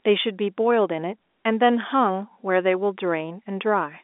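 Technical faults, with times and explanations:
No faults are present; the speech comes through a narrow telephone band of roughly 250 Hz to 3.6 kHz, consistent with ordinary G.711 telephone coding at its usual 64 kbps.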